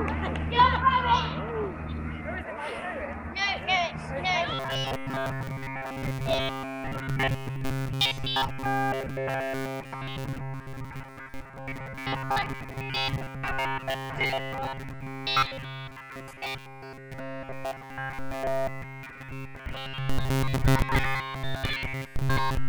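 From about 4.54 s to the end, the sound goes robotic, a rigid metallic buzz near 134 Hz. That's likely repeated short buffers: new audio arriving too seldom, so roughly 7.5 ms chunks get replayed, covering around 70 percent of the time.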